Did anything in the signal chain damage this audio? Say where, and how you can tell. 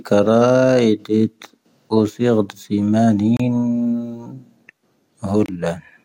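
Yes. The speech drops out abruptly for about 28 ms at 3.37 to 3.40 s and about 25 ms at 5.46 to 5.48 s, then resumes where it stopped. This is a gap at a join of encoded pieces: untrimmed encoder delay and final-frame padding left silence at each join.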